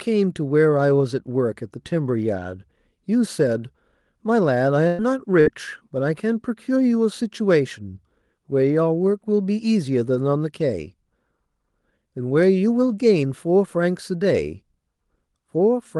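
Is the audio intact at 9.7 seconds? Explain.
Yes, the speech at 9.7 seconds is intact, with nothing beyond the ordinary character of the Opus call path, whose band tops out around 12 kHz.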